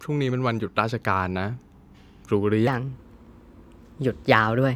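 From 2.67 s to the end of the clip, the speech runs as a section at the wrong speed. It plays 1.2 times faster than it was recorded, and the pitch rises with it by roughly three semitones, so the voice turns hurried and noticeably higher from that point on. Because speed and pitch shift together, the likely cause is that this stretch was played back or resampled against the wrong clock.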